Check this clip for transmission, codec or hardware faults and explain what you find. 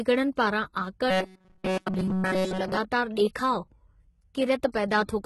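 Two faults are present: codec damage throughout and a robotic stretch from 1.11 to 2.77 s.

Throughout, the speech carries heavy codec damage, likely HE-AAC compression at a rate fitting about 16 kbps. Nothing reaches above 11.8 kHz, and the replicated treble sounds gritty. Plain low-pass dulling would not add that grit.

From 1.11 to 2.77 s, robotic sound from repeated short buffers, likely caused by repeating segments of about 5.3 ms. This imposes a rigid 188 Hz buzz over practically the whole stretch. Dropouts would leave gaps instead of this buzz.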